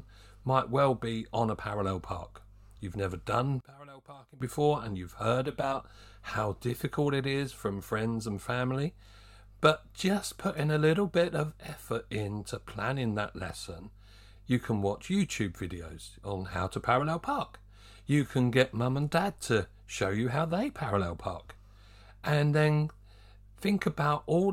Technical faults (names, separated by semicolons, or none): one channel inverted